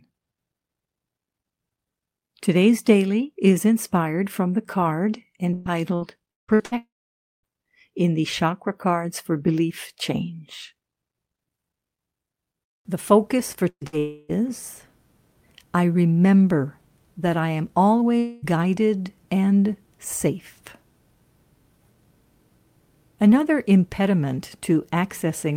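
Repeated packet loss (robotic sound) runs from 5.53 to 6.74 s. The speech breaks into a choppy stutter: five gaps in quick succession, the longest 170 ms, each covered by stretching the last sound forward. About 38% of that stretch is this patching rather than real audio, and roughly 480 ms of speech never arrives.

A long network dropout follows at 6.77 to 7.59 s, most likely the connection stalling outright. The last sound is carried on for about 660 ms as a fading buzz or hiss, with around 550 ms of that sinking into silence. Speech resumes with that span missing.

A burst of packet loss at 13.69 to 13.84 s swallows about 120 ms: the receiver holds the last sound and fades it, leaving a brief held sound that turns silent for about 60 ms. A second, shorter burst at 13.87 to 13.96 s loses about 60 ms the same way before the audio jumps ahead.

Two more long network dropouts come at 13.99 to 14.32 s, about 300 ms, and 18.19 to 18.45 s, about 240 ms. 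In both the concealed sound stretches across the whole gap without reaching silence, standing in for speech that is then skipped.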